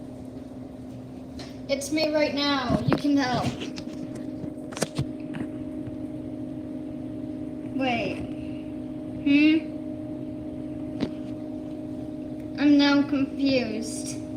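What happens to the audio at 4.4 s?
Nothing goes wrong at 4.4 s; the audio plays through that moment intact, with no dropout, click or other fault.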